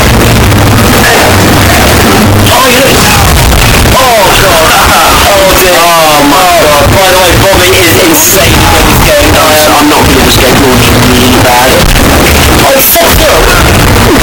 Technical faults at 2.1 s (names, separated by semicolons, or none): float read as integer